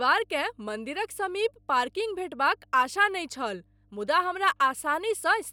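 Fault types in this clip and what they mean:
Mains hum: present for the whole clip, a steady 50 Hz tone with some low harmonics sitting about 35 dB below the speech. It comes from the power line leaking into the signal path, most often through a ground loop or a nearby transformer.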